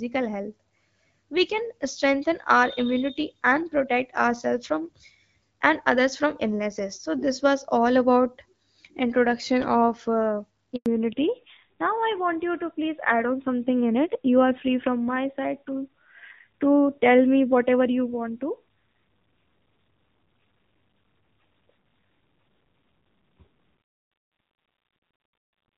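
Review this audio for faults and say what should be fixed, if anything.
A handover gap appears at 10.76 to 10.86 s: the call switched networks and no speech frames arrived for 100 ms. The voice dies away almost at once and the line stays silent until the new link starts, so that stretch of speech is lost. Keeping both network links active until the new one carries frames (make-before-break handover) would close this hole.

A fallback to narrowband follows from 10.86 s to the end: the call left HD Voice, whose light coding before the switch fits AMR-WB at about 12.65 kbit/s, for an older codec. Nothing above 4 kHz remains, and the voice turns duller and rougher, which fits AMR-NB near 7.4 kbit/s. Ensuring the target network supports AMR-WB, or renegotiating back to it after handover, would prevent this drop.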